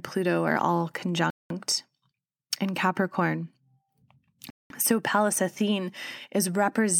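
Speech, broken by a gap between chunks: 200 ms silences at 1.30–1.50 s and 4.50–4.70 s, spaced 3.0 s apart. Unlike a dropout, no sound is lost; it resumes exactly where it stopped, pointing to late chunk playback or codec padding.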